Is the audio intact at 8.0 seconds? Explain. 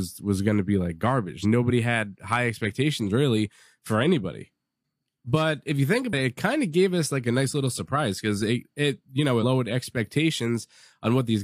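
Yes, at 8.0 seconds the speech plays through cleanly with no audible fault.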